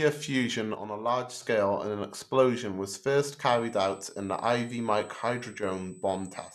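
From 0.75 to 1.42 s the speech level drops abruptly by about 6 dB and then returns, a sudden thinning as if half the signal were missing. This is most likely one channel dropping out: with one side of the stereo pair gone, the mono sum keeps only half of the shared content, and anything carried only by the lost side vanishes. A second, much shorter dip of the same depth occurs from 5.58 to 5.63 s, heard as a brief flicker in level.

From 3.49 s to the end, a USB whine sits under the speech, a fixed-pitch tone at 8 kHz and roughly 30 dB below the signal. The pitch matches the USB bus's 125-microsecond microframe rate: the bus draws current in bursts at that rhythm, and the ripple leaks into the audio path through shared power or ground. Because the frequency is high, it comes across as a high-pitched whine.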